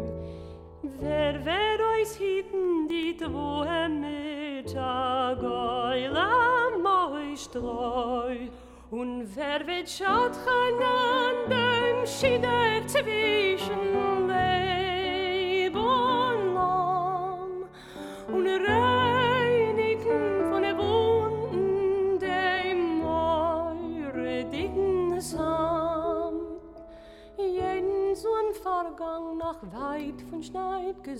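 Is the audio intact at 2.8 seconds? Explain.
No. From 2.64 to 3.03 s, four short ticks break into the sound, the longest a very brief dropout of about a millisecond. These are CD scratch ticks: a disc blemish ruins more data per rotation than error correction can rebuild, so the player patches or mutes those samples.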